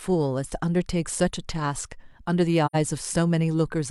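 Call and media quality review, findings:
Speech dropout, 2.65–2.76 s: brief soft-edged gap, about 0.1 s, in the speech. Probable component: AAC decoder, AAC frame loss with muting. The hole's length fits two lost frames. The decoder zeroes the missing spectrum, and the overlapping windows fade the sound out and back in. Distinguishing cue: tapered edges, unlike the hard cut of raw packet loss, and silence rather than the repeated or smeared sound of concealment.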